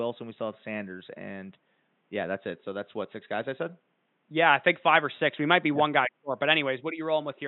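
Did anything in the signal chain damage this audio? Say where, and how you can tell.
No, nothing damaged this audio.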